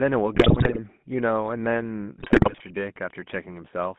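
Throughout, the GSM full-rate codec gives the speech a buzzy, gravelly roughness; the spectrogram shows energy only between 150 Hz and 3.5 kHz, consistent with a 13 kbps coder.

From 0.34 to 0.79 s and again from 2.18 to 2.61 s, GSM bit errors corrupt the decoded frames, producing squawks and gargling, with smeared harmonics and sudden level spikes in the waveform.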